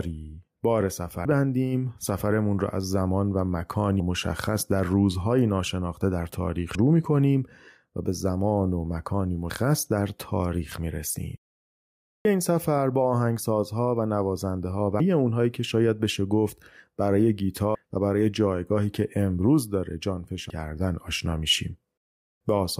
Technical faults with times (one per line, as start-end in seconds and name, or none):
1.25 audio missing between chunks
4.00 audio missing between chunks
6.75 audio missing between chunks
9.50 audio missing between chunks
12.25 audio missing between chunks
15.00 audio missing between chunks
17.75 audio missing between chunks
20.50 audio missing between chunks